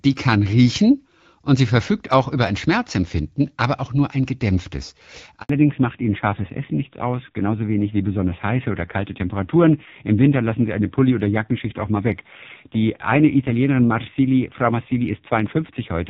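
A speech recording where, just after "auch nur ein gedämpftes", the voice abruptly drops out for about 80 ms (5.41 to 5.49 s). That is a handover gap: the call switched networks and no speech frames arrived until the new link came up. From 5.49 s to the end, everything above 4 kHz is missing and the voice turns dull and rougher. This is a fallback to narrowband, with the crisp HD Voice sound of the opening seconds giving way to what sounds like narrowband AMR at a low rate.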